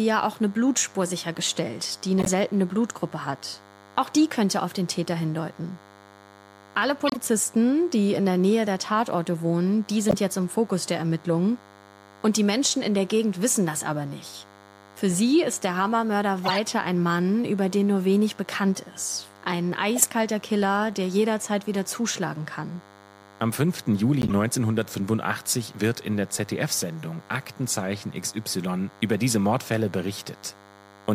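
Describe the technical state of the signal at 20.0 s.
A compressed frame arrived with flipped bits, and the decoder played it anyway instead of concealing it. From 19.96 to 20.05 s, misread gains and codes push energy into the wrong frequencies. The 90 ms span fits roughly three damaged frames in a row. This corrupt frame decoded as a sharp, loud burst of chirpy noise that peaks around -5 dBFS, and then cuts off as clean frames resume.

Under this, a nearby DECT handset or base station is sending radio bursts every 10 ms, and the audio circuitry rectifies them. At 20.0 s this DECT cordless phone buzz is present as a thin, steady 100 Hz tone rich in harmonics, sitting about 25 dB below the speech. It continues through the corrupted moment and on either side of it.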